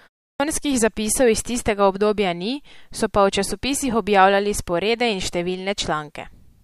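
At 0.32 s, a clipped start after a pause: the device wakes late, losing 79 ms, so the waveform leaps from flat line straight into speech mid-sound.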